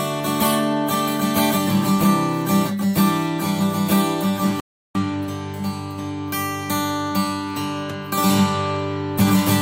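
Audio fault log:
4.60–4.95 s: rebuffering stall. The sound drops abruptly to silence for 350 ms and then picks up exactly where it left off, with nothing skipped or repeated. The playback buffer ran dry before the next chunk of audio had downloaded, so the player halted output and waited. Because the stream pauses rather than jumps, no content is lost; the gap simply inserts 350 ms of dead time into the timeline.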